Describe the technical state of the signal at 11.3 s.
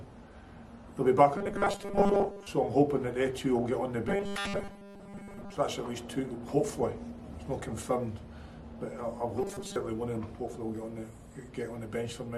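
At 11.3 s the signal runs clean, with no dropout, distortion, noise burst or other fault audible at that point.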